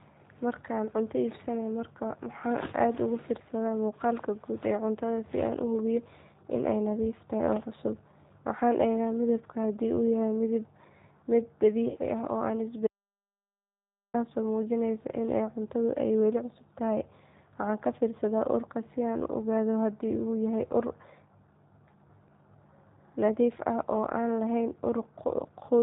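From start to finish the speech carries the sound of the G.729 codec, which fits 8 kbit/s coding: a vocal tract filter and sparse pulses rebuild each frame, so the voice sounds rough and synthetic, and a spectrogram shows nothing above 4 kHz.

At 11.90 to 11.98 s comes VoIP packet loss concealed by the speech codec. About 50 ms of audio went missing, and the decoder extended its last pitch and filter in its place. The result is a brief stretched sound that fades. A spectrogram shows smeared, repeated harmonics, and the waveform decays in steps.

From 12.87 to 14.14 s there is an audio dropout to silence, most likely from a lost input. The sound cuts off abruptly and nothing at all is heard for about 1.3 s, with no room tone. The waveform is flat, and the spectrogram is blank.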